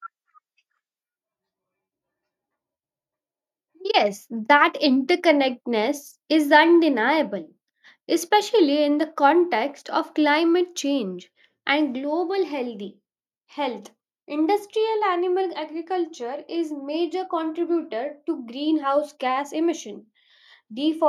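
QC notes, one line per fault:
Nothing to flag here; the speech runs along without a single problem worth noting.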